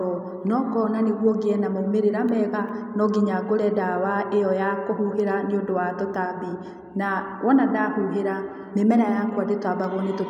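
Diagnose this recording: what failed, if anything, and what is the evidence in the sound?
Nothing failed; no fault is audible in the speech.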